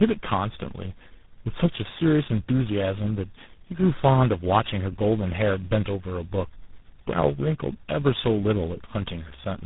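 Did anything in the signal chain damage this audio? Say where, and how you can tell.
Yes, at the codec stage, tandem speech coding throughout: the speech sounds rough, muffled and warbly, as if passed through about three low-rate speech coders in a row, such as GSM full rate then G.726. A spectrogram shows nothing above 3.8 kHz and smeared, unsteady formant bands.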